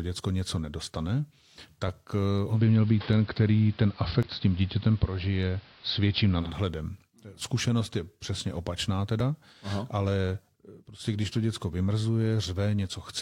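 Speech, with digital radio blending to analogue from 2.48 to 6.54 s: a 152 ms cross-fade into AM, level shifting about 4 dB, and hiss some 30 dB down. Short skips at 4.23 and 9.20 s, each around 20 ms, are likely audio missing between chunks at a 5.0 s chunk boundary.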